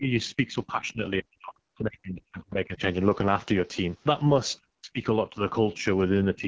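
The whole clip carries AMR wideband (HD Voice) codec damage: rough, raspy speech that fits its second-lowest rate, around 8.85 kbit/s, with nothing above 8 kHz. The talker then drops away from 0.0 to 2.81 s and 4.6 to 5.09 s, by as much as 40 dB, with shallower dips from 5.27 to 5.88 s and 6.33 s to the end, most likely speech suppressed in double talk by the echo canceller.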